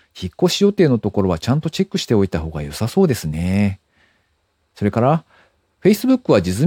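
Listening through this speech recording, nothing stood out as a technical fault at any point.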